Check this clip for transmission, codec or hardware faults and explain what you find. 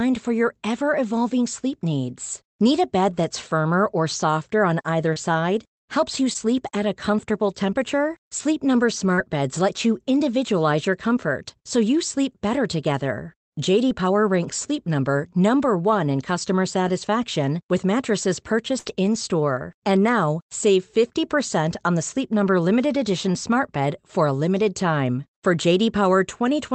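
Two forms of packet loss are present.

Short concealed packet loss at 5.13 s (after "or softer on either"), 6.33 s, 9.14 s and 13.89 s (after "you sleep better together"): about 20 ms never arrived, and the receiver extended the preceding sound to fill it. Each is a brief smear, shown on a spectrogram as a thin, overly smooth vertical strip.

A burst of packet loss at 18.78–18.87 s, after "customer satisfaction with mattresses": about 80 ms went missing. The last sound was stretched and faded before the audio jumped ahead, leaving a flattened, decaying waveform patch.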